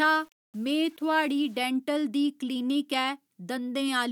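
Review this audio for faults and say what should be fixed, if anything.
From 0 to 1.66 s the speech carries a grainy, gritty distortion that shifts with the sound and worsens on quieter syllables, sitting roughly 35 dB below the speech. This is likely low bit depth without dither: rounding to coarse steps, consistent with 8-bit samples, leaves error that tracks the signal. To prevent it, keep at least 16 bits through processing and apply dither whenever reducing bit depth.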